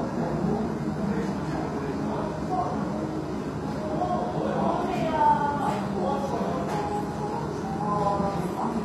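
Throughout, the treble sounds gritty and metallic and ends near 14.9 kHz. This is likely HE-AAC compression rebuilding highs from copied lower bands, consistent with about 24 kbps.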